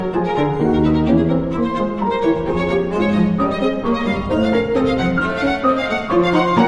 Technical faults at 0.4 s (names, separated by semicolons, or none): none